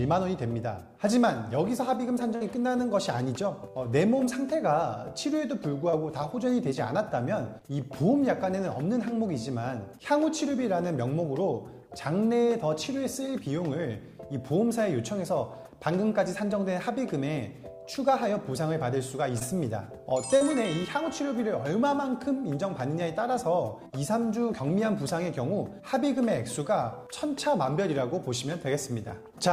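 The audio has one burst of packet loss at 2.35 to 2.43 s. About 60 ms went missing, and the receiver stretched the last sound into roughly 52 ms of decaying continuation before the audio resumed further along, leaving a held, fading patch and a small skip in content. Short concealed packet loss occurs four times, at 5.91 to 5.94 s, 7.58 to 7.63 s, 19.39 to 19.43 s and 20.37 to 20.43 s. Each loses 20 ms, or 40 ms in the last case, bridged by 17 to 39 ms of extrapolated signal that blends back in and is heard as a brief smear or wobble.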